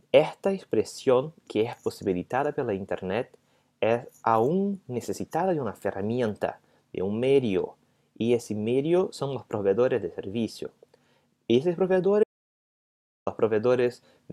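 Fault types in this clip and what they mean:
Audio dropout to silence: from 12.24 s to 13.27 s the sound cuts off abruptly and about 1.03 s of it is simply missing, replaced by silence with no room tone underneath, before the audio resumes mid-flow. On a waveform this is a flat line between two hard edges; on a spectrogram it is a dark vertical band across every frequency. The cause is likely a momentary loss of the input signal while recording continued.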